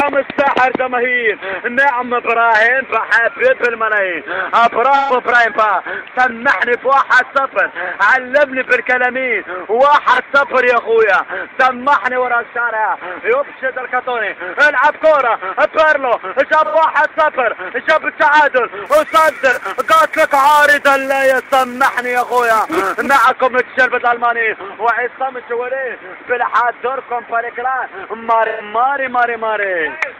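Short smeared, noisy and phasey patches interrupt the sound at 4.96 to 5.12 s, 10.12 to 10.18 s and 16.64 to 16.75 s. This is AAC frame loss with concealment. Whole coded frames went missing, and the decoder bridged each gap by reusing the last good spectrum with randomised phase and smoothed energy. The gaps run about 128 ms, 43 ms and 85 ms, which fits losses of three, one and two frames.

From 18.86 to 23.25 s a steady buzz near 345 Hz rides along with the sound, rising and falling with its level. This comes from a filter restarted on every block. The filter drops its internal state at each block boundary and restarts from silence, so every block opens with a tiny transient. At that repeat rate, the 345 Hz spacing fits a 128-sample block.

Within that stretch, at 19.51 to 19.58 s, another concealed AAC frame loss of about 43 ms smears the sound briefly, consistent with one missing frame.

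At 28.47 to 28.62 s a final smeared, phasey patch of about 128 ms marks the last AAC frame loss with concealment, matching a three-frame gap.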